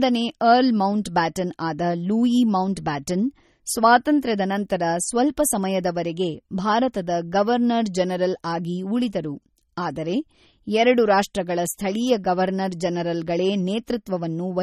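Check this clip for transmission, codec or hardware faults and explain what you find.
Likely MP3 compression, throughout the speech. Short of bits, the encoder cuts everything above 16.6 kHz and drops weak frequency lines that flicker frame to frame. The damage is plainly audible as a watery, swirly texture, which fits a bitrate around 32 kbps.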